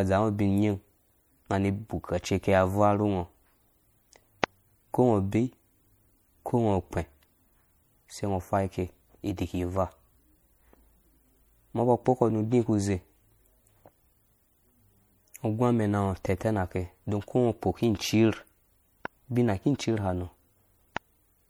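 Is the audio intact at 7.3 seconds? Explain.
No. MP3 compression affects 7.3 s, as it does the whole speech clip, and likely explains the sound: short of bits, which fits a 64 kbps encode, the encoder lets weak frequency lines flicker between frames, leaving a watery, swirly tone with metallic sibilants and smeared attacks.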